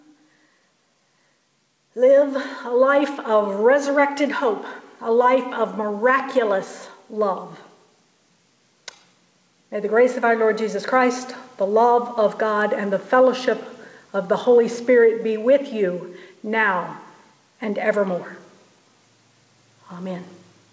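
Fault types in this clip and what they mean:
Gain pumping: The level breathes throughout the clip. The swing is around 10 dB. Loud and soft passages end up too close in level, so the whole sound feels squashed and flat. The likely cause is gain set far too high for the microphone, with a fast limiter or compressor pulling it down on each peak.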